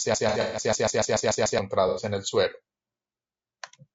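Throughout the clip, the speech has most likely been through low-delay AAC compression of the AAC-ELD kind used for video calls. Its short frames capture pitch harmonics poorly, and the damage is plainly audible: the voice is rough and grainy, with noise filling the gaps between harmonics and a thin, synthetic-sounding top band. The degree of roughness fits a low rate of around 32 kbps.

From the very start to 1.59 s, a broken-record loop is already under way. The player, encoder or stream likely stalled and kept resending the last fragment it held. A 146 ms piece repeats back to back ten times, giving a stuttering, mechanical judder, and whatever should have played during those 1.59 s is lost.

Within that loop, from 0.29 to 0.61 s, there is AAC frame loss with concealment. Frames went missing, and the decoder patched the gaps from the last good spectrum. About 180 ms of audio is lost, scattered across 240 ms, with the longest gap lasting about a tenth of a second. 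The result is a smeared, noisy, phasey patch laid over the repetition.

A second AAC frame loss with concealment runs from 1.88 to 2.02 s, just before "en el suero". Here about 90 ms is rebuilt from the preceding spectrum, three frames in all, and it comes through as a brief blurred, noisy smear.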